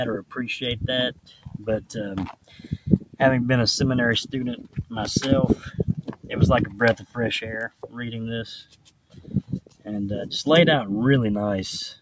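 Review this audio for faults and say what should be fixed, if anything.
Noise suppressor applied to music or sounds, throughout: a speech-tuned suppressor treats sustained material as noise, so the level pumps by roughly 10 dB.

Sound cut by the noise suppressor at 1.14–1.61, 2.33–3.2, 4.63–4.84, 5.99–6.3, 6.99–7.16, 7.69–7.96, 8.65–9.3 and 9.6–9.86 s: held sounds and decays sink by about 10 to 12 dB while attacks pass.

To prevent this, switch off the call's noise suppression, or use a music mode, whenever non-speech audio is sent through the microphone path.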